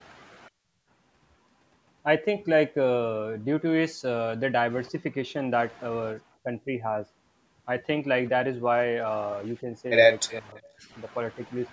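From 6.43 to 6.77 s the speech level dips by about 10 dB for around a fifth of a second, which is likely speech suppressed in double talk: with both ends active, the echo canceller's suppressor treats the near talker as possible echo and pulls the gain down. A much smaller dip of the same kind, about 5 dB, follows at 9.61 to 9.66 s.

From 10.28 to 10.7 s an echo leak is audible. A faint copy of the voice returns 374 ms late, roughly 25 dB under the direct speech, most likely because one side's loudspeaker echo was not fully cancelled before being sent back. Inside that window, from 10.4 to 10.59 s, the suppressor likely clamps down hard, cutting the voice by about 35 dB so it nearly drops out for around 200 ms. A final shallow dip of about 5 dB occurs at 11.36 to 11.56 s. The band stops at 8 kHz, consistent with the call's microphone path.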